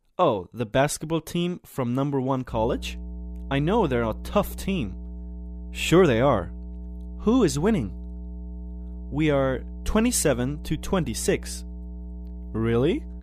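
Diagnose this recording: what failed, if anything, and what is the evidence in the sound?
Mains hum from 2.49 s to the end: a steady, fairly prominent 60 Hz tone in the analogue wiring, where a ground loop or nearby transformer couples the power line in.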